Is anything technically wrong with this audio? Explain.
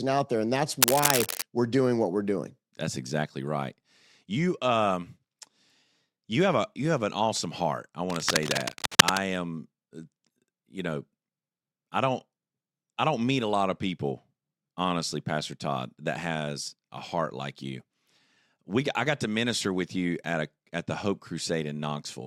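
Yes. There are two bursts of cable scratch noise in this speech. The likely cause is a worn cable, connector or control being moved, so its contact resistance jumps about rapidly and adds dense, uneven noise to the signal. From 0.82 to 1.43 s, just before "we're doing what we're", a rustling scratch sits at roughly the level of the speech. From 8.10 to 9.20 s, right after "an awesome heart I", a longer scratch rises somewhat above the speech.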